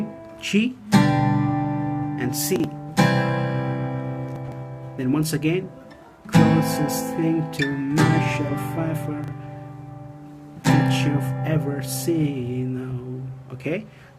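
The audio has chunks out of order at 2.56 to 2.64 s, 4.36 to 4.52 s and 9.24 to 9.32 s. A 40 ms block plays one chunk late, or three late at 4.36 s, so the sound briefly jumbles.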